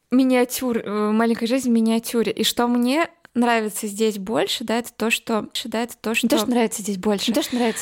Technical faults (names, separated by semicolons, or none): doubled audio track